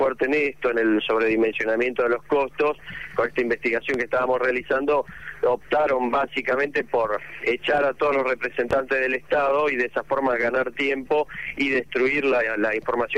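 At 3.94–3.98 s and again at 8.71–8.75 s, a loud pop stands roughly 10 dB above the surrounding sound, which continues beneath it. Likely a voltage spike from a switch or static, each shows as a tall waveform spike and a full-height vertical stripe.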